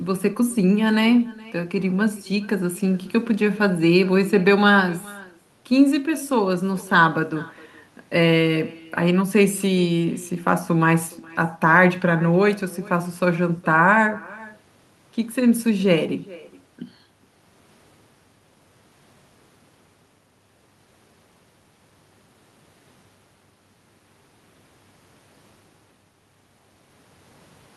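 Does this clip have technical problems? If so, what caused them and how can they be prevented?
Yes. Echo with no canceller: at the far end the call is played on a loudspeaker, the microphone there picks it back up, and no echo cancellation strips it out, so the talker's own signal returns after the network round trip. Throughout the speech, each phrase is trailed roughly 0.4 s later by a faint, thin copy at about 23 dB below the direct sound. Enabling acoustic echo cancellation on the far end, or having that participant use a headset, would prevent it.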